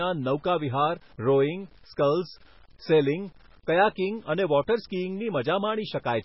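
From start to finish, the speech carries a grainy, gritty distortion, and quiet stretches and word tails break up into a rough sputter instead of fading smoothly. The error sits roughly 35 dB below the signal and moves with it, so it is not a steady background hiss. This is low bit depth without dither, likely from rounding down to 8 bits by truncation, where each sample drops onto a coarse step and the error follows the waveform.

Also present across the whole clip is heavy MP3 compression. The speech sounds watery and swirly, sibilants turn metallic and chirpy, and consonant attacks smear. Nothing reaches above 5.6 kHz, so the top end is dull. This likely comes from encoding at a very low bitrate, which fits 16 kbps. Short of bits, the encoder zeroes weak frequency lines that flicker on and off from frame to frame and cuts the treble at a fixed point.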